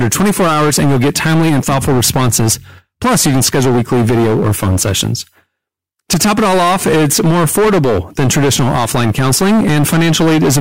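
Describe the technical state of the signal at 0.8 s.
At 0.8 s the speech is hard clipped, as it is across the whole clip. The level is driven about 12 dB past what the chain can pass. Nearly a third of samples hit the ceiling and are cut flat. Every loud syllable carries a harsh, buzzy fuzz.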